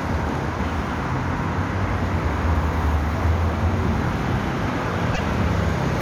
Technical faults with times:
5.13-5.20 broken MP3 bit reservoir

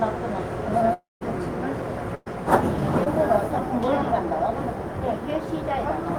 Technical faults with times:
0.93-1.23 long network dropout
2.15-2.28 burst of packet loss
3.04-3.08 short concealed packet loss

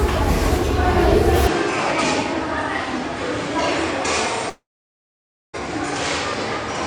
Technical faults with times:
1.47-6.86 input switched to a poorer device
4.49-5.55 long network dropout

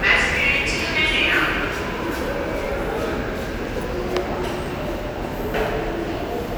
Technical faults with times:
0.63 overlapping chunks
1.64 overlapping chunks
2.65 overlapping chunks
3.65 overlapping chunks
4.66 overlapping chunks
5.67 overlapping chunks

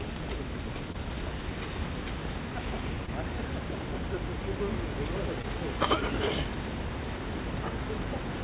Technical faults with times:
0.92-0.96 short concealed packet loss
3.06-3.10 short concealed packet loss
5.42-5.45 short concealed packet loss

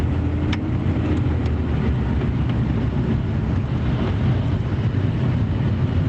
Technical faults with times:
none

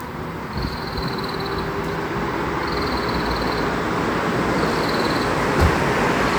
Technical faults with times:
none

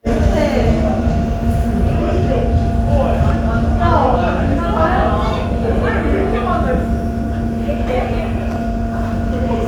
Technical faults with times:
none

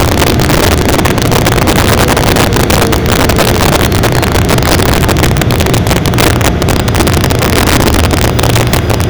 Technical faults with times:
0.00-9.09 integer overflow

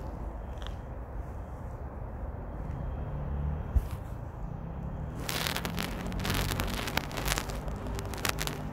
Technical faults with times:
5.88-8.62 train of clicks

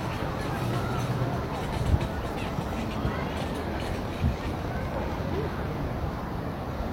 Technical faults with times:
4.05-5.30 train of clicks

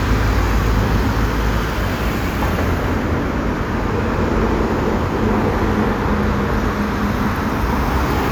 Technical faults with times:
none

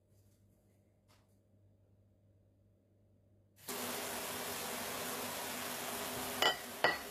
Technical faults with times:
0.00-7.11 HE-AAC compression

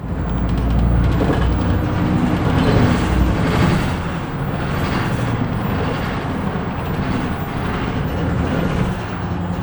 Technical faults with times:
0.00-9.62 channel delay (doubling)

